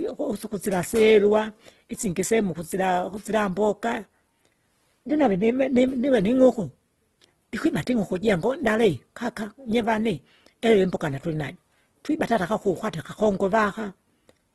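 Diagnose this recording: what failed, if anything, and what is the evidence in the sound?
The speech sounds rough and grainy from start to finish, with a noisy, papery texture on sustained sounds rather than the swirling holes of MP3, and nothing is present above about 12.1 kHz. This points to the codec stage: the grain comes from an encoder keeping each band's energy but filling starved bands with folded or noise content, likely Opus compression in its music mode at a low bitrate, consistent with roughly 16 kbps.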